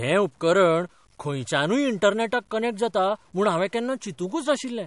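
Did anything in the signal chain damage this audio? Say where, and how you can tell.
Yes. Quiet speech sounds gritty throughout, with grain that tracks the signal about 40 dB down. This points to a sample-format conversion stage, likely low bit depth without dither, consistent with 9-bit truncation.

The whole clip is also watery and smeared, with nothing above 11.1 kHz. The likely cause is MP3 compression at the codec stage, which fits a 48 kbps bitrate.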